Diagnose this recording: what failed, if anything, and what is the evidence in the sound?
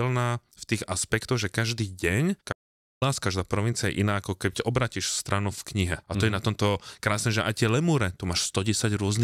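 An audio dropout to silence runs from 2.53 to 3.02 s, about half a second of the speech cut out mid-flow and replaced by silence with no room tone. That points to the input device or link, likely dropping out while recording continued. A noise gate or concealment would leave some residual noise or smoothing.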